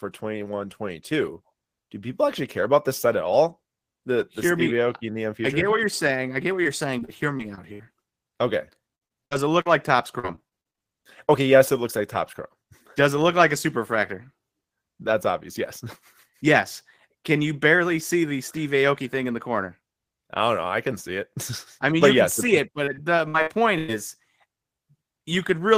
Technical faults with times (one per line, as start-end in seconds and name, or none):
6.63-7.81 repeated packet loss (robotic sound)
8.95-9.67 repeated packet loss (robotic sound)
10.19-10.79 repeated packet loss (robotic sound)
22.85-23.90 repeated packet loss (robotic sound)